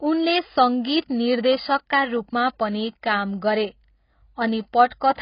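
From start to finish, the speech is dull and band-limited. Nothing sounds above about 5.1 kHz. The damage is heavy. Sibilants lose their edge and turn fizzy. Sustained vowels warble and smear. This points to AAC compression, likely AAC-LC at a very low bitrate, around 16 kbps. At that rate the encoder lowers its cut-off. It also leaves gaps in the spectrum, or fills bands with substitute noise.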